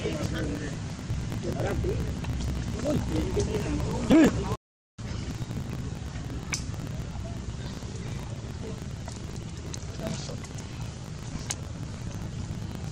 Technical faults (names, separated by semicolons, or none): block size mismatch (truncated)